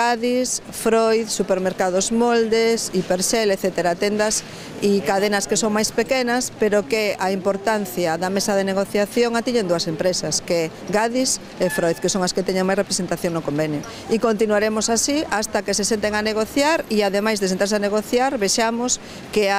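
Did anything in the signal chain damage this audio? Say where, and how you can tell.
No, nothing in the chain audibly damaged this audio.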